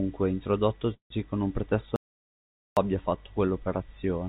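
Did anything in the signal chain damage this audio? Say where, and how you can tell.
Yes. From 0.94 to 1.12 s the speech stalls in a call audio freeze, at the network and jitter-buffer stage. The last sound is stretched into a fading buzz for about 40 ms, then roughly 120 ms of quiet, and the speech picks up exactly where it stopped. The cause is likely late packets draining the buffer. It differs from a dropout because nothing is lost; the rest of the clip is simply pushed back by about 160 ms.

From 1.96 to 2.77 s there is an audio dropout to silence of about 810 ms, at the capture or input stage ahead of the codec. The speech cuts off mid-flow and returns mid-flow, and the gap is silent with no room tone. Unlike the freeze, nothing is held or extended and the speech does not resume where it left off. Whatever was spoken in that span is gone, likely because the input was disconnected or muted while the recorder kept writing silence.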